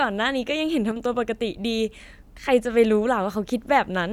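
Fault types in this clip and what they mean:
One channel drops out: From 0.91 to 0.96 s the speech abruptly falls by about 6 dB, then recovers. One stereo channel has likely gone silent for those 50 ms. Summed to mono, shared content halves in level, and anything only in that channel disappears.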